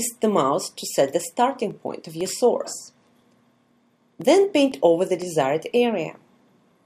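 From 0.21 s to 6.72 s there's a tick every half second, about fifteen in all: periodic USB or driver dropouts. Something keeps stalling the audio path on a fixed schedule, each time dropping roughly a millisecond of sound and leaving silence, so you hear regular little clicks.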